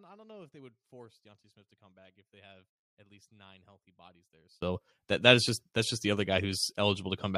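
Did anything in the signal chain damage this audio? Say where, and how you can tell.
Yes. From 0.0 to 4.62 s the speech nearly vanishes, dropping about 28 dB and leaving only a faint residue. The fault is one channel inverted, likely a polarity swap in the analogue wiring. Summed to mono, the matching content in both channels cancels.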